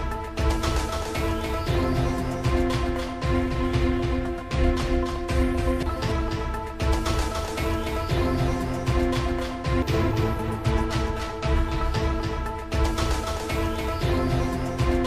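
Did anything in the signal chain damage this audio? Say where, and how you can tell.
Yes. Throughout, every sound is followed about a third of a second later by a dry, full-band repeat roughly 5 dB quieter, with no decay or room colour. This doubled audio track likely comes from a second, slower capture path or an edit stacking two offset copies.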